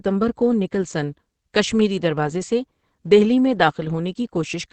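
From start to finish, the speech is muffled and hoarse. Nothing sounds above about 8.5 kHz, so consonants lose their crispness and the top end sounds closed off. The damage is heavy. The likely cause is Opus compression running in its speech-oriented SILK mode at wideband. That fits a low rate near 12 kbps, where the encoder models the voice coarsely instead of keeping fine detail.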